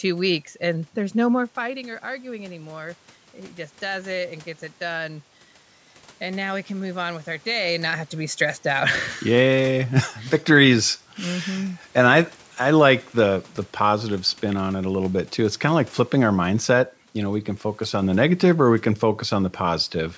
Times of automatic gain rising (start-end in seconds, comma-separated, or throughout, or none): 1.60-8.43